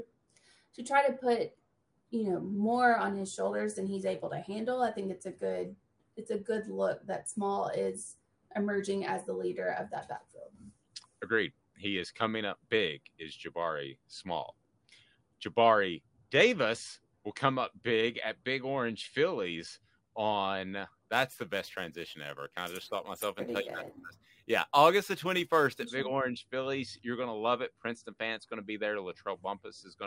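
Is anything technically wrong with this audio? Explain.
Yes. From 21.12 to 25.87 s there is imaging from sample-and-hold upsampling, which fits a source of about 22 kHz raised to 48 kHz by repeating samples without smoothing. Mirrored copies, the lowest spanning roughly 11 to 22 kHz at about −21 dB, add a metallic fizz. Unlike steady hiss, it follows the sound's level and moves opposite to its pitch.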